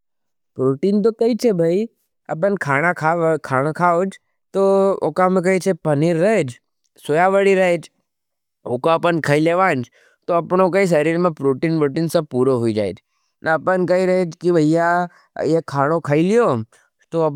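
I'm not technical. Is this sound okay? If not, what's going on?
Yes, it's fine; nothing in this recording sounds broken or glitchy, so there's nothing you need to worry about.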